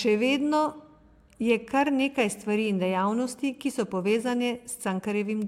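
No technical faults can be heard anywhere in it.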